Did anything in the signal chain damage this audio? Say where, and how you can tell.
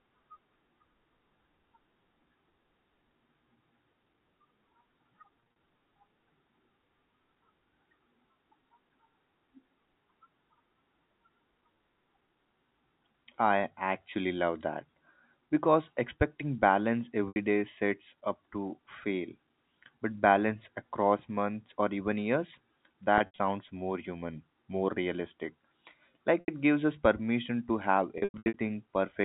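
Yes: network packet loss with pitch repetition at 5.4–5.56, 13.12–13.14, 17.28–17.36, 23.18–23.38, 26.4–26.48 and 28.18–28.54 s. The receiver repeats the last pitch period to fill each gap, so you hear brief buzzy, held tones.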